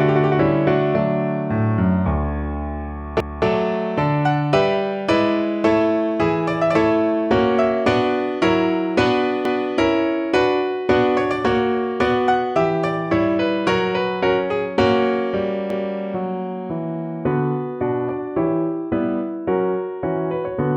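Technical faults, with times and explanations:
3.20 s, 9.45 s, 15.70 s: overlapping chunks. The audio was handled in 6-second chunks, each starting 250 ms before the previous one ended, so that quarter-second plays twice at every join. This produces a stutter at each seam, recurring about every 6.25 seconds.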